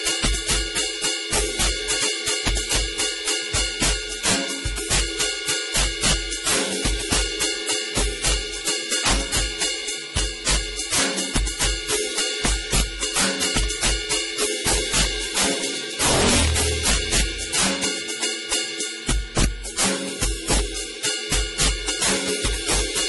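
Throughout the music, integer overflow breaks up the loud passages. The gain was pushed about 24 dB too far, and instead of being held at the limit, every sample beyond it wraps to the opposite sign. Roughly one sample in twenty crosses that line, so the peaks flip from one extreme to the other and the sound is much sharper than clipping. On a waveform, the tops jump abruptly to the opposite rail as vertical spikes. On a spectrogram, broadband vertical streaks sit on the loud moments.

For the whole clip there is also heavy MP3 compression damage. Nothing survives above 11.5 kHz, a hard treble cutoff that fits a low bitrate around 32 kbps. The music sounds watery and swirly, attacks are smeared, and there are metallic chirps in the bright parts. The likely cause is an encoder short of bits that zeroes weak frequency lines, which then switch on and off from frame to frame. A spectrogram shows a flat ceiling at 11.5 kHz and patchy, blocky gaps flickering below it.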